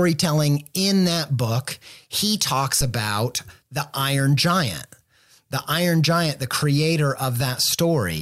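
A phantom power thump hits this speech recording from 2.81 to 2.94 s, right after "that book he talks": switching the supply on or off on a live input sends a voltage step through the coupling capacitors, producing a deep thump peaking at about -16 dBFS that dies away within 30 ms.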